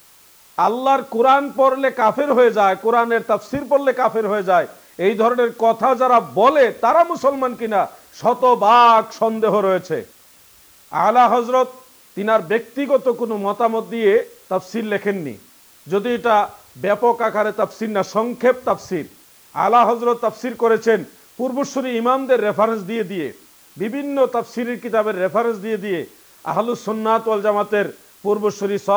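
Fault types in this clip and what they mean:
Low bit depth with dither: the audio is held at 8 bits, with dither added before each sample is rounded, so the rounding error becomes a steady white hiss throughout, sitting roughly 30 dB below the signal, even and constant, without the gritty distortion undithered truncation would leave.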